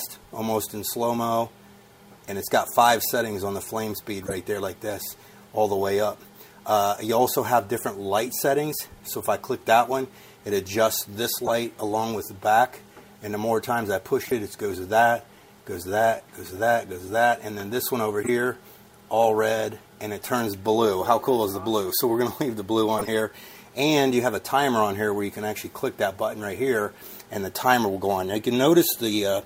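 Corrupt frames were decoded and played despite flipped bits, misplacing energy in frequency for one to five frames each: brief chirps and noise bursts at 4.22–4.33, 11.45–11.50, 14.22–14.32, 18.22–18.29, 21.53–21.55 and 22.98–23.08 s, loudest at 11.45 and 22.98 s.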